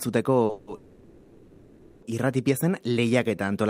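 At 0.45 s a short stall from a late packet holds the speech sound too long until about 0.51 s. About 40 ms is filled in and nothing is lost, which pushes the playout delay later by the same amount. On the waveform one pitch period repeats in a flat, regular train. On the spectrogram the harmonics run horizontally with a slight dip.

From 0.51 to 0.69 s, and again from 0.75 to 2.04 s, comes a call audio freeze. The last sound carries on as a buzz that fades into low, steady noise without reaching silence, and then the speech resumes exactly where it stopped. The cause is likely packets held up in transit, emptying the jitter buffer. The two freezes insert about 160 ms and 1270 ms of gap. On the spectrogram each shows as smeared, decaying bands with no new onsets. The waveform shrinks to a thin noise floor.

From 2.89 to 3.45 s a jitter buffer slow-down stretches the speech to about 90% speed, adding 65 ms without changing pitch. 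Single pitch periods repeat to rebuild the buffer, so sounds drag. The spectrogram shows harmonics at normal spacing with elongated segments and duplicated, evenly spaced glottal pulses.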